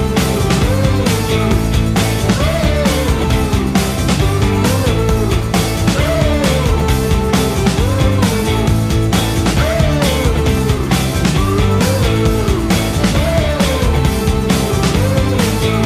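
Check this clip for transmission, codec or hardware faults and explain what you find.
No transmission, codec or hardware faults can be heard anywhere in the clip. Nothing in the sound points to a problem with how it was sent, encoded or recorded.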